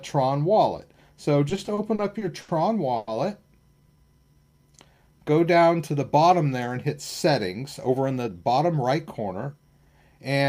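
From 1.49 to 2.50 s the sound stutters and drags through seven short holds of up to 70 ms: repeated stalls (stutter), where late packets kept emptying the jitter buffer and the receiver stretched the last sound across about 190 ms.

At 2.96 to 3.09 s the sound hangs for 110 ms, held as a continuing buzz or hiss without dropping to silence, then resumes. This call audio freeze likely comes from delayed packets draining the buffer, adding 110 ms of delay.

From 3.80 to 5.93 s the sound plays at 88% speed with unchanged pitch and drawn-out stretches. This jitter buffer slow-down repeated tiny pitch-period slices, adding 267 ms to rebuild its reserve.

From 7.86 to 10.44 s the sound runs hurried at 109% speed, still at the same pitch. This jitter buffer speed-up trimmed small pieces repeatedly, roughly 200 ms in all, to cut excess delay.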